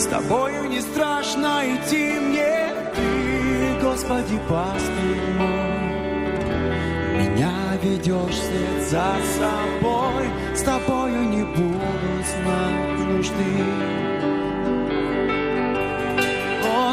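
Right around 2.06 s there's a call bitrate drop that lasts until about 4.61 s. The call's bandwidth estimate sagged and the encoder got squeezed: the coarser sound fits a fall from roughly 48 kbps to something near 16 kbps, sitting at that floor for about 2.5 s. With so few bits to spend, the codec quantises everything more roughly, so the sound goes grainy and watery until the rate climbs back.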